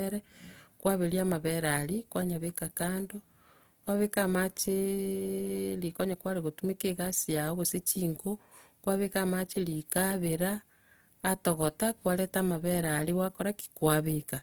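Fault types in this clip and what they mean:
Opus compression: The encoder was likely short of bits, at a rate that fits about 24 kbps. It kept each frequency band's overall energy and filled detail it couldn't afford with folded copies of lower bands or with noise, the way its music mode works. Throughout the clip the speech sounds plainly rough and grainy, with a noisy texture in place of clean tone. The bandwidth stays full, reaching up to 20.2 kHz.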